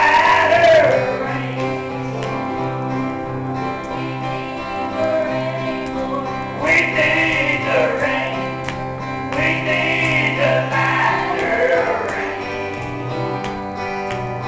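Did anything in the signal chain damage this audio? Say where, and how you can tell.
No, nothing along the way seems to have hurt this one; I can't hear any trace of damage from any stage of the chain.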